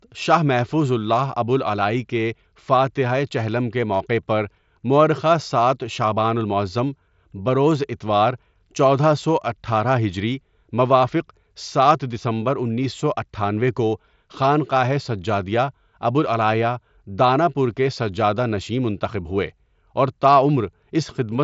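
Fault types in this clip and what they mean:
No faults are present; the speech passes through a Bluetooth mSBC headset codec working as designed, with audio bandwidth reaching about 8 kHz and only the light coding graininess on louder passages that this wideband headset codec brings.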